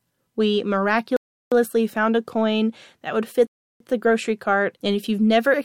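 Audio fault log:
1.17–1.52 s and 3.47–3.80 s, Bluetooth stall: the speech drops to dead silence for about 0.35 s and 0.34 s, then resumes, likely because the headphone buffer ran empty while lost packets were resent. Waveforms show flat gaps and spectrograms blank columns.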